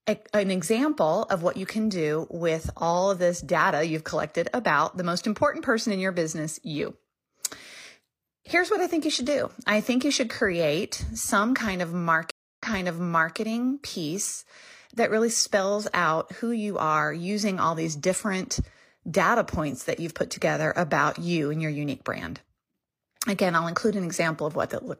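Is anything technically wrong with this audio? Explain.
Yes, there's a stream reconnect between 12.31 and 13.37 s. The speech drops to silence for about 274 ms, then comes back roughly 0.79 s earlier than where it cut off, so you hear a short stretch repeated. That's the connection breaking, the player reconnecting and spinning up a fresh decoder mid-stream, with the server resending a recent burst. The restart comes in softly for the first frame or so rather than at full level.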